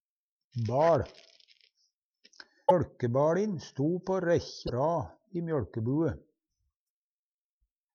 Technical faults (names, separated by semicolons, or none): broken MP3 bit reservoir